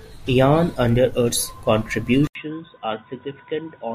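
At 2.27 s the speech breaks for about 80 ms and comes back duller and boxier, with nothing above 3.8 kHz, roughly 10 dB quieter and over a faint new noise floor. This is likely an input switched to a poorer device. Unlike an equaliser change, tone, level and noise all shift together, and they stay that way to the end.

At 2.84 s, compressed frames are skipped. About 30 ms of speech vanishes, which fits a single dropped frame of about 26 ms. Overlapping frames blend across the gap, so the join is a brief smeared blip. A sample-level dropout would give a hard click instead.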